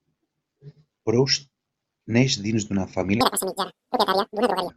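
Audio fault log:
3.21–4.70 s: audio read two samples at a time (double speed). The speech here plays at 2x speed and a full octave (12 semitones) higher, because each pair of consecutive samples is being consumed as a single frame, as if the data held two interleaved channels or samples twice as wide. Half the frames are effectively skipped, so time compresses and pitch doubles.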